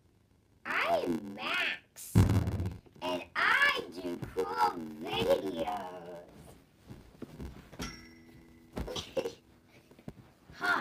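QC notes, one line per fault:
Throughout: block size mismatch (padded). There's a steady buzz at about 86.1 Hz running through the whole thing, and everything plays back slow, at 0.861x speed, while the timbre stays. One stage is handing over blocks a bit shorter than the next one reads, which fits a 512-sample read block, and the leftover space gets zero-filled. Those tiny gaps repeat every block, hence the buzz and the stretched timing.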